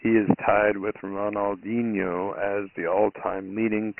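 Dialogic VOX ADPCM damage runs throughout: nothing above 3 kHz, pointing to a 6,000-sample rate, with gritty 4-bit hiss riding the speech, unlike clean telephone band-limiting.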